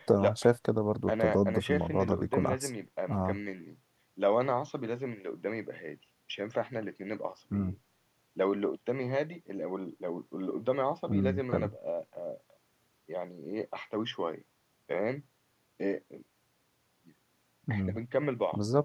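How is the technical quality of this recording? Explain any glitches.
No technical faults can be heard in this speech recording, and there are no glitches to explain. Nothing interrupts or disturbs the audio at any point in the clip.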